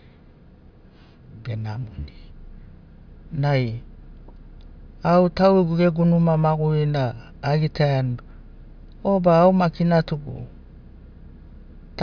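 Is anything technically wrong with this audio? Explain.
No, nothing technically wrong stands out anywhere in this speech recording, so there's nothing here to flag.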